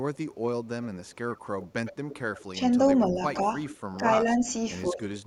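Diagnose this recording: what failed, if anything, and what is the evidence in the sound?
Echo leak at 0.14–2.42 s and 3.68–3.98 s: a copy arrives 107 ms late, about 20 dB down, likely loudspeaker echo the call-processing canceller missed.

Speech suppressed in double talk at 2.52–2.58, 3.08–3.46, 3.98–4.44 and 4.87–5.0 s: speech dips about 5 to 15 dB, likely the canceller ducking overlapping talk.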